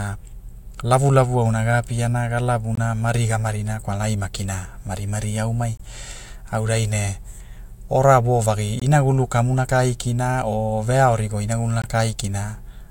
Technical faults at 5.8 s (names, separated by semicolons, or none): gap between chunks